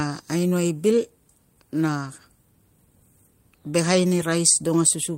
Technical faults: clock drift between sender and receiver; repeated timing corrections

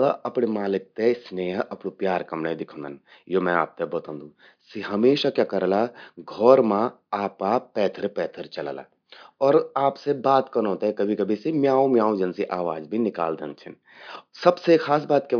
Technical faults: none

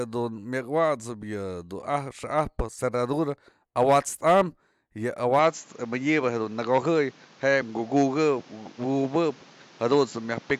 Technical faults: input switched to a poorer device

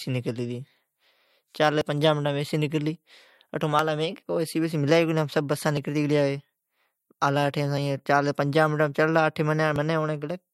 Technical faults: overlap between stream segments

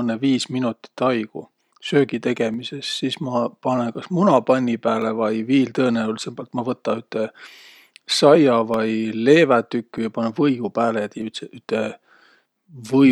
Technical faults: clock drift buffer slips

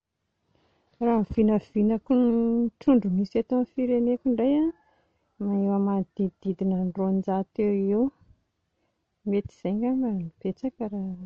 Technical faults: MP2 compression

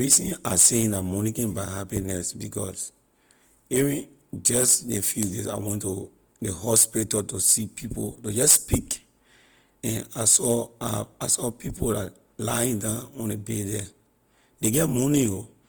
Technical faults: Opus compression

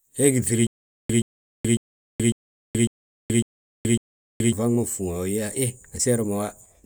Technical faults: stutter with silent gaps

